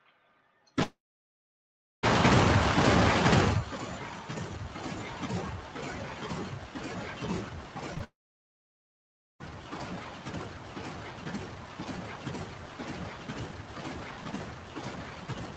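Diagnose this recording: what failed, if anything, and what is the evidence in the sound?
Call processing stage: a noise suppressor meant for speech was applied to music or sounds throughout. Sustained tones and decaying tails are pulled down while attacks pass, producing a level swing of around 20 dB, heard as pumping and thinning of held sound within the 8 kHz call bandwidth.

Network stage: two long network dropouts, at 0.83 to 2.05 s and 8.04 to 9.50 s. Each begins with a brief concealment tail that fades, then goes silent for about 1.06 s and 1.27 s respectively. The audio resumes with that stretch missing, likely lost packets.

Network and decoder stage: short concealed packet loss at 7.95 s and again at 7.98 s, each a 20 ms gap. The decoder extrapolated the preceding sound and cross-faded back, leaving a brief smear just before the second dropout starts.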